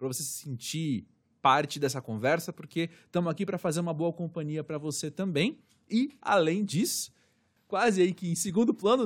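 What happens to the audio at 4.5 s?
Nothing goes wrong at 4.5 s; the speech there plays through intact, with no dropout, click or distortion.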